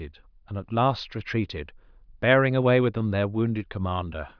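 No technical faults can be heard anywhere in it.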